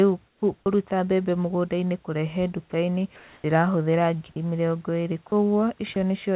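From 0.28 to 0.42 s, likely comfort noise in place of the background: the real room sound becomes flat, featureless hiss about 9 dB quieter, an even, textureless band on a spectrogram.

Sound dropped by the voice detector, likely discontinuous transmission clipping speech, occurs at 0.60–0.66 s (just before "mbembe mũgũndainĩ kũrehe"), 2.70–2.72 s (just after it), 3.16–3.44 s, 4.32–4.36 s, 5.28–5.32 s and 5.94–5.96 s. In each, speech briefly vanishes into steady noise, leaving short, uniform gaps in the waveform's speech envelope.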